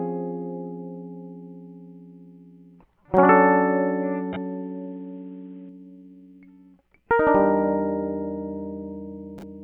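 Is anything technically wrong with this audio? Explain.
Yes. From 3.17 to 5.69 s the music turns dull and boxy, then clears again, with no gap at either change. This is an input switched to a poorer device, likely a narrowband microphone or headset profile replacing the original input. Nothing above 3.8 kHz gets through, the level shifts by about 5 dB, and a faint new noise floor sits far beneath the music. On a spectrogram, the upper bands vanish abruptly across that span. The waveform shows a step in level at both edges.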